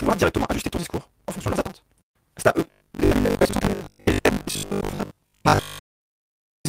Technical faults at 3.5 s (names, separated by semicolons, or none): block size mismatch (truncated); robotic sound from repeated short buffers